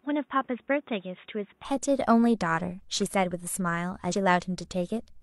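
From the start to 1.65 s the speech sounds dull and boxy, with nothing above 3.8 kHz, a level roughly 5 dB lower, and a faint background noise of its own sitting about 40 dB under the voice. At 1.65 s the full bandwidth returns at once, with no silent gap at the change. That abrupt return to fuller sound is likely an input switched to a poorer device, a narrower-band microphone or headset call profile, back to the main one.

From 4.09 to 4.14 s there is a brief glitch where the speech jumps forward, losing roughly a tenth of a second of audio. This is compressed frames skipped: the decoder never played a short run of encoded frames, most likely about two frames of 46.4 ms each.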